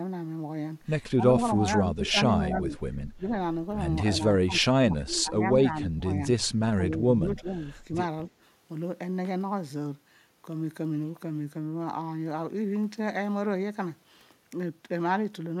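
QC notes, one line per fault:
1.16–1.26 s, 1.48–2.16 s, 2.48–3.00 s, 3.16–3.30 s, 4.18–5.50 s, 5.68–6.20 s, 6.90–7.50 s: speech suppressed in double talk. The speech dips in level, by roughly 10 dB at most points and up to about 30 dB around 4.2–6.2 s. This is likely an echo canceller mistaking overlapping far-end talk for echo and ducking both.
2.06–2.10 s: echo leak. A faint, brief copy of the speech returns 275 ms late, about 20 dB below the main signal. This is likely loudspeaker pickup that the far end's echo canceller failed to fully remove.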